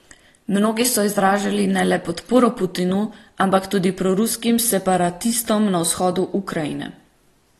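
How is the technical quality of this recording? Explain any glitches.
The recording is noticeably degraded by lossy coding. AAC compression runs throughout: nothing is present above 12.4 kHz, and the speech sounds dull and smeared, with fizzy sibilants. This is likely from AAC-LC at a low bitrate, consistent with about 32 kbps, discarding high frequencies and coarsely quantising what remains.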